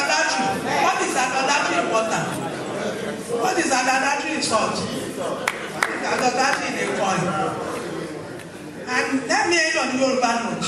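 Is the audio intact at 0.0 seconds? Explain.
Yes, the audio is intact at 0.0 seconds, with no fault audible at that moment.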